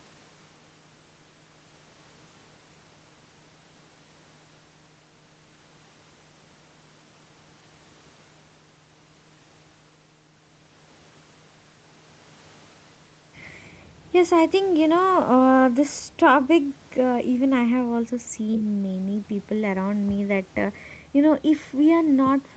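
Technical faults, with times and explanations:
No technical faults are present; the speech shows only the expected call microphone processing, with the lowest bass rolled off by its high-pass filter and nothing above 8 kHz.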